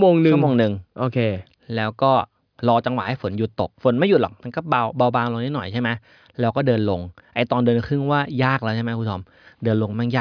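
No technical faults can be heard anywhere in the speech.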